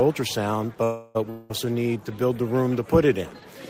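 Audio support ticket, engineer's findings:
0.83–1.18 s: call audio freeze. Last sound stretched into a fading buzz for about 0.31 s, then audio resumes where it stopped, nothing lost, playback now about 0.31 s later. Likely jitter buffer underrun from delayed packets. Spectrogram shows smeared, decaying horizontal bands; waveform shows a shrinking, repetitive envelope.

1.30–1.52 s: long network dropout. Again a decaying buzz filling about 0.2 s, but audio returns further on with roughly 0.2 s of content skipped. Likely packet loss in transit. Spectrogram shows a fading smear then an abrupt discontinuity; waveform shows a tapering envelope before a sudden resumption.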